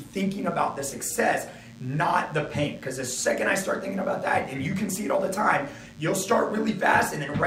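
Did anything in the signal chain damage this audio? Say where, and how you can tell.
Yes. A DECT cordless phone or its base station close to the analogue input wiring is putting a radio burst into the circuit every 10 ms, and the circuit rectifies it into audio. The result is a DECT cordless phone buzz: a thin, steady 100 Hz buzz with a dense stack of harmonics, running from start to end and sitting roughly 30 dB below the sound. Its fixed 100 Hz repetition shows the 10 ms burst timing.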